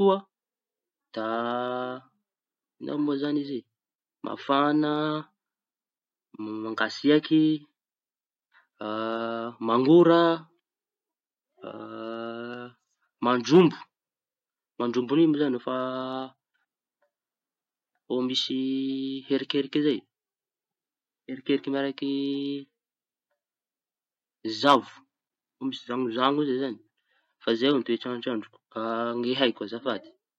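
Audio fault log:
No audible faults found.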